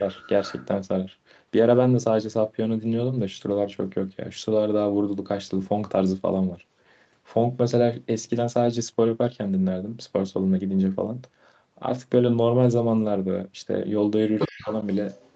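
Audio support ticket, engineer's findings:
Speech suppressed in double talk, 0.00–0.06 s: brief dip of about 5 dB at the very start, likely the echo canceller ducking the near talker while the far end is active. Same fault, 14.48–14.73 s: deep cut of around 40 dB, roughly 200 ms of speech nearly gone, the canceller likely treating overlapping near-end speech as echo and suppressing both.

Other side's voice leaking through, 0.11–0.67 s: a second voice audible under the talker at about 20 dB down, likely residual loudspeaker echo left by the canceller. Same fault, 14.39 s to the end: low-level far-end voice again at about 20 dB below speech, overlapping the suppression at 14.48 s, likely incomplete echo removal during double talk. Top end of both voices stops near 8 kHz, which fits an Opus call path at 48 kbps.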